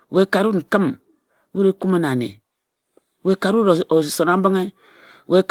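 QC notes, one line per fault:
Nothing stood out on listening to this speech recording.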